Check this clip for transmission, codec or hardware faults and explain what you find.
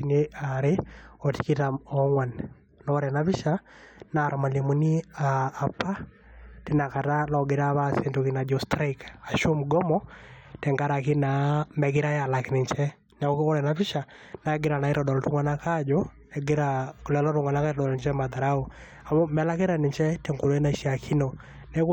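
No faults turn up anywhere in the recording. The speech continues without any break, glitch or disturbance that would point to a problem along the way.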